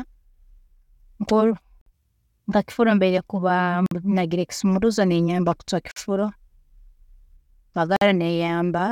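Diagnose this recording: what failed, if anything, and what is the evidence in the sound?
Hard-edged 50 ms silent holes at 1.81, 3.86, 5.91 and 7.96 s: a gap between chunks, where playback inserts silence at each 2-second chunk join.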